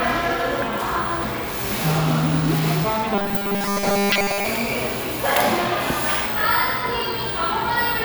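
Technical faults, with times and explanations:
0.62 s, damaged data in a compressed stream: corrupted data in the encoded stream made the decoder misread the frame there and lose sync while it hunted for the next valid header. The result is a brief glitch.
3.15 to 4.46 s, robotic sound from repeated short buffers: new audio was likely arriving too seldom, so playback kept looping the last 5 ms chunk, replacing most of the real material. That 5 ms repetition imposes a fixed 200 Hz buzz, giving a rigid, metallic tone.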